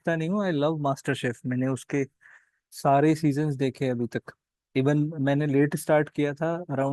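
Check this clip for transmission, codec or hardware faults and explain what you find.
No transmission, codec or hardware faults turn up in this clip.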